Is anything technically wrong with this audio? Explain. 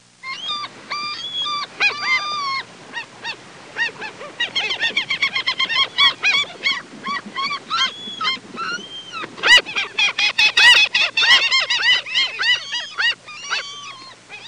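No, nothing in this audio stood out as a technical problem on listening.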